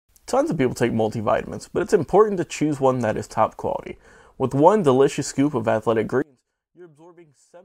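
Speech clip where, after "delicious scoop of athletic", the sound collapses by about 32 dB from 6.22 s to 7.65 s, likely one channel inverted; a faint residue remains instead of true dropout silence.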